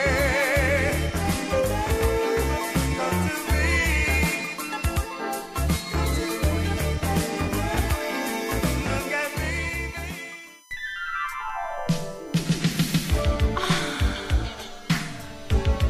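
A USB whine runs throughout: a steady tone on a 1 kHz series, strongest at its 6 kHz harmonic, roughly 30 dB below the signal. The bus's 1 ms frame activity leaks through power or ground, unlike mains hum, which sits at 50 or 60 Hz.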